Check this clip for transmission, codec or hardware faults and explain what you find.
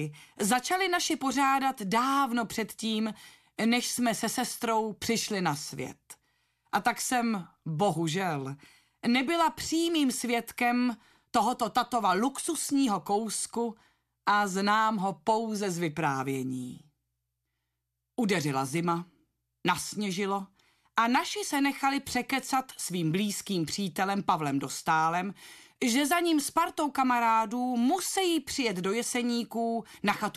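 No faults found.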